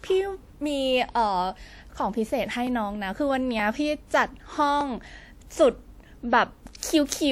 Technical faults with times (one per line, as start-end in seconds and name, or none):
2.67 dropped samples
4.81 dropped samples
6.80-6.83 pre-echo